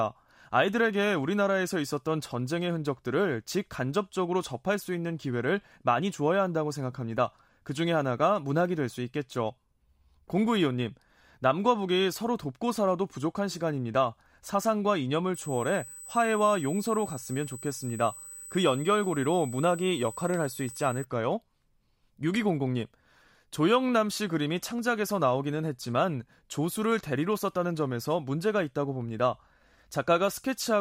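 From 15.34 s to 21.04 s the speech carries USB whine, a steady fixed-pitch tone at 8 kHz with its strongest component at 16 kHz, sitting roughly 15 dB below the speech. The bus's 125-microsecond microframe current draw is leaking into the audio through power or ground. On a spectrogram it shows as thin, unwavering horizontal lines at 8 kHz and 16 kHz, independent of the speech energy.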